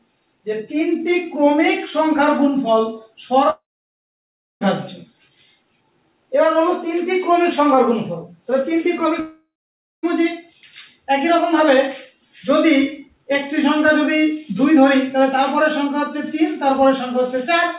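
From 3.5 to 4.64 s, and again from 9.2 to 10.06 s, the sound smears into a fading buzz, drops to silence for about 1.0 s and then 0.57 s, and resumes with material missing. This is likely a long network dropout, with concealment filling the gaps, through a narrowband path cut off above 4 kHz, which fits G.711 at 64 kbps.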